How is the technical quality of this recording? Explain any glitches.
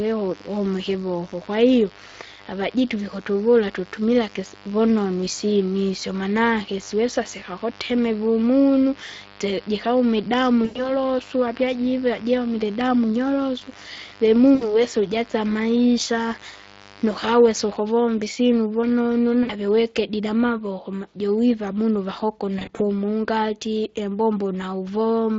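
The recording has clear technical problems: the speech sounds coarse and processed from start to finish, a raspy hum sits underneath for most of it, and there are four short dropouts where the sound turns smeared and buzzy.

Speex codec: Throughout the 25 seconds, the speech is hoarse and grainy, with a noisy, slightly synthetic edge and a hissy, indistinct top end. This comes from Speex, a CELP speech codec that rebuilds speech from a compact filter and excitation model. The damage here suggests a mid-range setting of roughly 20 kbps. At that rate, too few bits describe the excitation, and the highest band is filled with shaped noise rather than real detail.

Mains buzz: From 0 to about 17.8 s, a steady, rasping buzz runs under the speech at about 25 dB below it, then stops. This is mains buzz on a 50 Hz supply. Sharp switching spikes, probably from a dimmer, a rectifier or poor shielding, enter the signal twice per mains cycle. 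That spiky shape produces a long series of harmonics stretching into the kilohertz range, which is why it sounds gritty rather than like a smooth low hum.

VoIP packet loss concealed by the speech codec: There are four brief disruptions where the speech stretches into a droning tone or coloured noise and fades. They occur at 10.65 to 10.92 s (100 ms of audio lost), 14.55 to 14.82 s (60 ms), 19.43 to 19.52 s (60 ms), and 22.59 to 22.81 s. The last one is 80 ms of loss scattered across 200 ms, with no gap longer than 40 ms. Network packets went missing, and the decoder filled each gap by extending its last pitch and filter while lowering the level. Because every frame depends on the one before, the speech stays weak or warped briefly after each gap ends, which is why the audible disturbance outlasts the missing audio.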